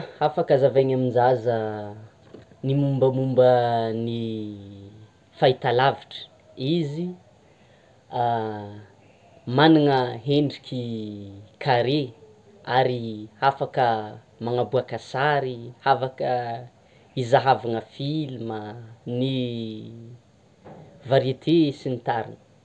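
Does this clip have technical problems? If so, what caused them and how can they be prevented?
No, this clip doesn't have technical problems, so there is nothing to prevent.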